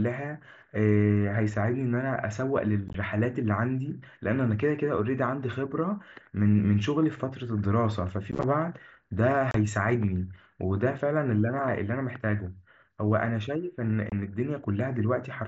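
Unconcealed Bluetooth headset packet loss occurs at 2.88–2.95 s, 8.31–8.44 s, 9.51–9.55 s and 14.10–14.12 s. Short voice packets between headset and phone went missing and were replaced with silence rather than patched over. The first two events scatter about 38 ms and 60 ms of gaps across their spans, with no single gap longer than 15 ms, and sound like rough crackling chop. The later two are brief abrupt holes of about 30 ms and 23 ms. The wideband mSBC link carrying the speech gives it only a light graininess.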